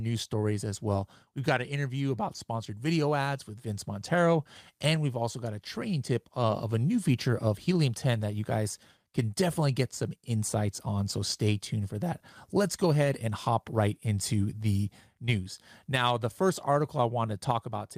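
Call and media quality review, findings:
No technical faults found in the signal path for this speech recording; level, continuity and timing hold steady throughout.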